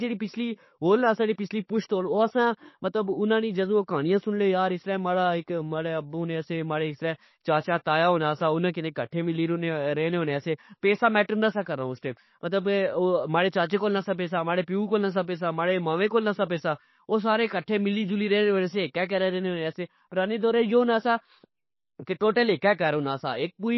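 From start to finish the speech sounds watery and swirly, with nothing above 5.8 kHz, so s sounds turn dull and chirpy. That's likely heavy MP3 compression, pointing to a very low bitrate around 26 kbps, where the encoder cuts the treble and drops weak detail.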